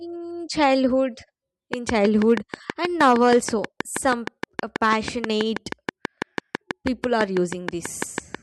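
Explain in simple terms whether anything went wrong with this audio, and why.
A train of clicks runs from 1.74 s to 8.36 s. About forty loud, evenly spaced ticks, 6.2 per second, sit over the speech, likely from electrical interference.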